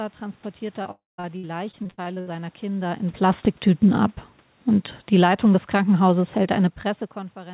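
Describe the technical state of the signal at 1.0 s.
At 1.0 s the signal sits inside a stretch of repeated packet loss (robotic sound) running from 0.82 to 2.28 s. Eleven short holes appear in that span, none longer than 70 ms, each patched by stretching the last received sound, so about a quarter of the span is concealment. The result is choppy, with fragments missing. What separates it from a single dropout is that the audio keeps returning between holes.

Within that stretch, 0.91 to 1.2 s is a different event: a continuous gap of about 0.28 s, likely a long network dropout. The concealment first carries the last sound forward as a fading buzz or hiss, then gives way to roughly 0.17 s of near-silence before the audio resumes with that portion simply gone. Unlike the brief stutters around it, this is one sustained hole that decays into quiet rather than flickering on and off.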